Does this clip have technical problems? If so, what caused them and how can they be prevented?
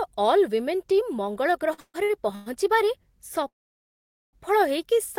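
Yes. From 1.73 to 2.48 s there are repeated stalls (stutter): packets arrived late four times, the jitter buffer kept running dry, and the receiver stretched the last sound over gaps of up to 138 ms. About half that stretch is filled-in sound, yet nothing is lost, and it is several short hitches rather than one long stop. A larger adaptive jitter buffer and a steadier network path would prevent it.

From 3.48 to 4.35 s a call audio freeze stops the speech once for about 0.85 s, most of it silence, then resumes where it left off with nothing dropped. The single long halt, not a series of short ones, sets it apart from the stutter, and packets held up in transit are the likely cause. Prioritising voice traffic (QoS) and avoiding congested links would prevent it.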